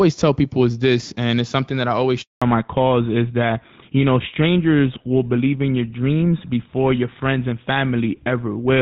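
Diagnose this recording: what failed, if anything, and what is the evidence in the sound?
The level ducks about 5 dB under loud sounds throughout. This is gain pumping, likely a fast limiter in call processing fighting excessive mic gain.

After "something that I always", the speech drops to silence from 2.22 to 2.42 s. This is a 200 ms network handover gap: no frames arrived during the switch.

From 2.42 s the speech turns dull and rough, with nothing above 4 kHz. This is a codec fallback to narrowband, from AMR-WB at 12.65 kbit/s down to GSM full rate.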